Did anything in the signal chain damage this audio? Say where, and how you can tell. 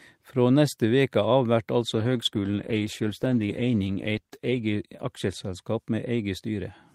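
Yes. At the codec stage, a call bitrate drop degrades the speech from 1.83 s to 5.91 s. The sound turns coarse and watery and loses its top end, bottoming out for about 2.8 s before clarity returns. This fits the encoder being told to fall from roughly 48 to 15 kbps. Unlike packet loss, there are no gaps or concealment glitches, and unlike a fixed filter, the dulling and roughness rise and recover together.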